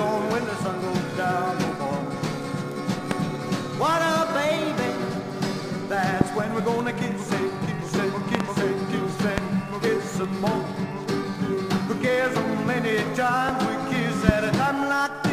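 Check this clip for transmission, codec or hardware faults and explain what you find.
Two kinds of fault are present: one bit error spike and five loud pops.

The bit error spike comes at 2.72 s. A single sample jumps to about -19 dBFS and returns. A flipped bit in memory or on a digital link shifts that value by a power of two. It is heard as one sharp, broadband tick.

Loud pops occur at 3.11, 6.21, 8.35, 9.38 and 14.29 s. The one at 8.35 s is a double pop lasting about 80 ms. The others last around 20 ms. They peak roughly 20 to 25 dB above the sound. Each is likely a voltage step or pulse from a plug, switch, static or driver glitch. It is heard as a sharp pop or thump over the sound, which continues underneath.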